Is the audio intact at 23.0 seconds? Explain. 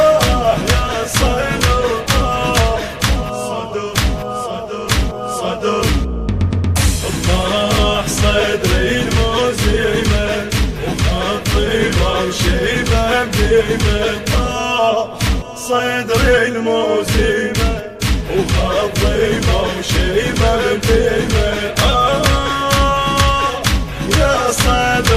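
Yes, the audio is intact at 23.0 seconds, with no fault audible at that moment.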